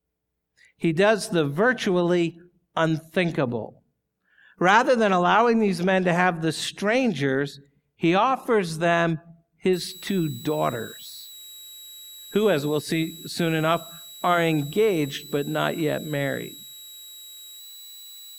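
A speech recording that picks up a switching supply whistle from 9.73 s, right after "strangers he offers them", through to the end at 18.39 s. A thin, high tone sits around 4 kHz, roughly 20 dB below the speech, wandering between about 3.84 and 3.95 kHz. That pitch drift sets it apart from a steady test tone or feedback ring: it tracks a power supply whose switching frequency shifts with load.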